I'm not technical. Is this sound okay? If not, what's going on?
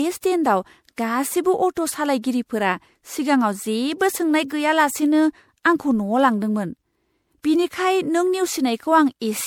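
No. The speech has generation loss from start to finish: it sounds swirly, hollow and smeared, with soft edges on sharp sounds. It was likely saved in a compressed format like MP3 about four times over, and each save stacked new damage on the last.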